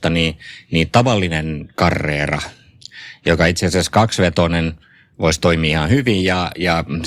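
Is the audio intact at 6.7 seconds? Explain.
Yes, the speech plays through intact at 6.7 seconds, with no dropout, click, distortion or other fault at that moment.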